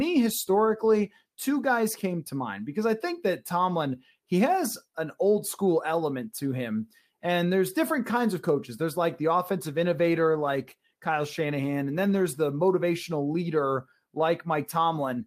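At 9.65 s, just after "like the", a call bitrate drop sets in and lasts until 14.29 s. The encoder is starved of bits, so the speech is coded coarsely and sounds rough and watery. The worst stretch lasts about 2.3 s. It fits a fall from roughly 64 to 25 kbps.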